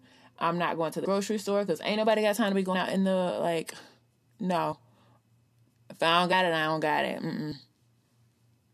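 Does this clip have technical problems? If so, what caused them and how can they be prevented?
Yes. The speech has compressed frames skipped at 1.04 s (after "I'm not going to"), 2.73 s (after "got time to be"), 4.71 s, 6.31 s (after "if I don't") and 7.51 s. Each is a jump where the audio skips ahead by roughly 100, 70, 20, 40 and 40 ms, consistent with whole frames of about 21 ms being lost or rejected as damaged by the decoder. Verify file integrity after transfer and use error-protected storage or transport.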